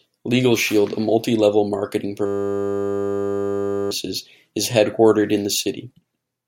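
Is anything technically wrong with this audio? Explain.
Yes. A system hang loop runs from 2.26 to 3.91 s: the system stalled while the audio hardware kept replaying one 10 ms buffer. That repetition produces a steady 100 Hz buzz in place of the speech, and about one and a half seconds of audio is lost.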